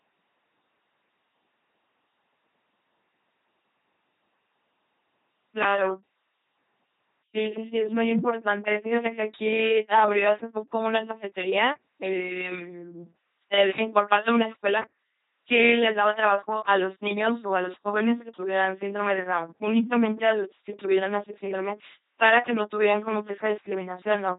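Speech coded throughout by an LPC-10 vocoder at 2.4 kbit/s. Every frame is driven either by a pulse train or by noise, so the voice sounds buzzy and robotic, with stray buzz or hiss where voicing is misjudged. The damage is heavy and nothing remains above 3.8 kHz. Unlike a muffled low-bitrate waveform codec, the natural voice texture is replaced entirely.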